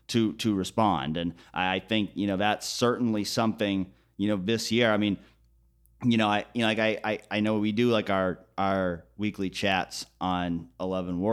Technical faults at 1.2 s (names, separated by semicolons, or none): none